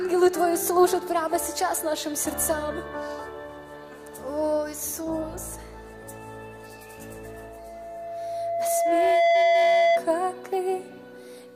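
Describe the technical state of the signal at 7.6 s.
At 7.6 s, a loudspeaker feedback squeal is underway, running from 7.24 s to 10.07 s. A microphone is picking up the loudspeaker it feeds, and at 678 Hz the loop gain exceeds one, so that frequency keeps reinforcing itself. The tone swells over roughly two seconds to about 10 dB above the program. Unlike mains hum or a steady interfering tone, it starts quietly and grows rather than sitting at a fixed level.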